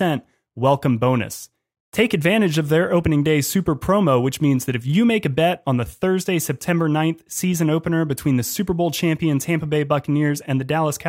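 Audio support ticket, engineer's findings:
No technical faults detected.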